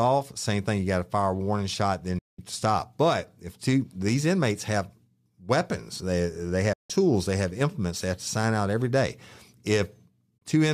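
The speech cuts to silence through quick fades at 2.18 to 2.39 s, 6.73 to 6.90 s and 10.38 to 10.42 s. These are digital broadcast dropouts: the receiver muted while the signal was lost or frames failed their checksum, so that audio is lost.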